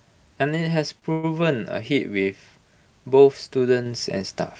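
At 0.99 s a sound in the speech is held slightly too long, a brief smeared sustain with a faint buzz lasting until 1.04 s. This is a short stall from a late packet: the jitter buffer ran dry, so the receiver stretched the last audio for 26 ms and then resumed without losing anything.

From 1.12 to 1.25 s there is a longer held, buzzy continuation that fades a little but never falls silent, then the speech picks up exactly where it stopped. This is a call audio freeze, most likely caused by packets delayed in transit emptying the jitter buffer. About 113 ms of filler was inserted and nothing was dropped.

At 3.86 s the voice and the room noise jump up together by about 4 dB in a single step. This is a microphone volume step-up: the call software judged the input too quiet and raised the device's gain at once rather than gradually.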